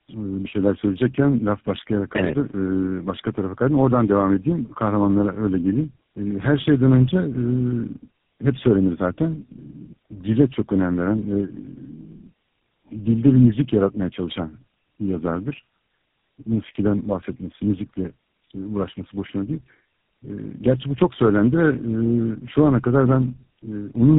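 Tandem speech coding runs through the whole clip: the speech sounds as though it passed through three low-rate speech coders in a row, likely an AMR-type mobile codec, a G.729-type coder and finally GSM full rate, joined by ordinary 64 kbit/s telephone links. Each coder re-encodes the previous one's damage, so the speech is rougher, more muffled and more warbly than one codec would make it, with nothing above 3.8 kHz.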